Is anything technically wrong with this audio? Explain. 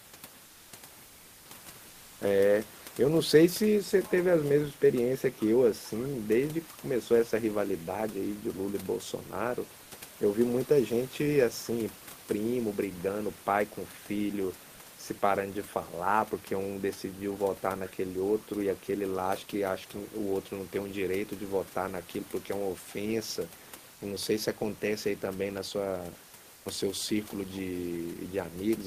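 Yes. Comfort noise in place of the background appears at 0.45–0.71, 1.05–1.49, 1.89–2.21, 9.83–9.91 and 26.55–26.65 s. In these pauses the genuine room noise gives way to a steady, featureless hiss about 1 to 4 dB quieter. The likely cause is discontinuous transmission, where the receiver synthesises noise while the sender is idle. Unlike a noise gate or a dropout, the background never falls silent.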